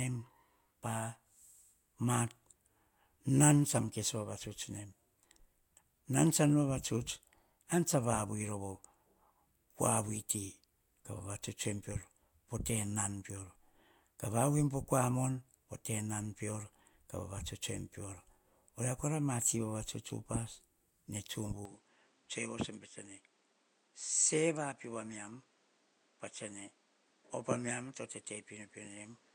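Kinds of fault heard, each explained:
Input switched to a poorer device: from 21.65 s speech turns duller, about 5 dB quieter, cut above 9.5 kHz, with faint new background noise, likely a mid-recording device switch.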